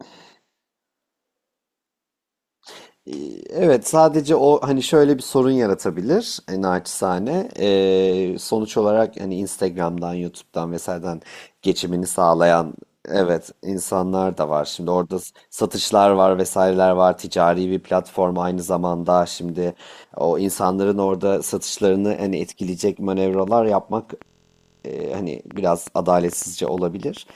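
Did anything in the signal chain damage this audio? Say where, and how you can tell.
Yes. From 23.34 s to the end of the clip at 27.36 s there is a train of clicks: sharp, similar-shaped pops at about six per second, unevenly spaced, audible over the speech and in its gaps, with peaks about as loud as the speech itself. The likely source is interference coupling into the analogue wiring or a faulty connection or power supply. On a spectrogram they show as thin vertical broadband lines; on the waveform, as isolated narrow spikes.

Between 24.27 and 24.85 s a system hang loop replaces the speech with a steady buzz. A 23.22 ms segment repeats exactly, 25 times, at 43.1 Hz, which fits a 1024-sample buffer being replayed while the driver froze. Little or no audio appears to be lost after it. The waveform shows identical repeating blocks. The spectrogram shows a comb of harmonics spaced 43.1 Hz apart with no change over time.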